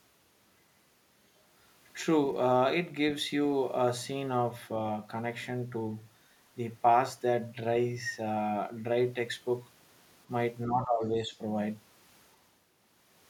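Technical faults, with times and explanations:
10.66–11.04 s and 11.22–11.32 s, speech suppressed in double talk: sound drops about 15 dB, then about 5 dB, likely from an echo canceller ducking during overlapping talk; the waveform pinches.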